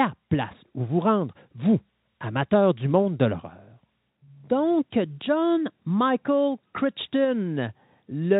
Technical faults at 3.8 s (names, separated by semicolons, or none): none